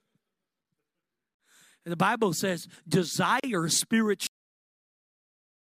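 It's a speech clip, and there's a gap at a join of encoded pieces twice: a gap of about 52 ms at 1.35 to 1.40 s and about 38 ms at 3.40 to 3.44 s. They land 2 s apart, so the audio was encoded in 2 s chunks and spliced without trimming the encoder's start delay and end padding. Each time the speech drops out with smeared edges and then resumes right where it left off. Then there's a cut-off end at 4.27 s, where the speech stops mid-sound and falls straight to digital silence with no decay, because the final buffers never got written.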